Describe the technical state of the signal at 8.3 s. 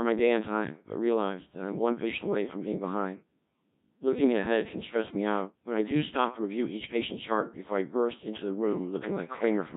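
At 8.3 s it's still that Codec 2 vocoder running through the whole clip: the speech is rebuilt from pitch and envelope data, so it's heavily buzzy and robotic, consistent with roughly 1.3 kbit/s.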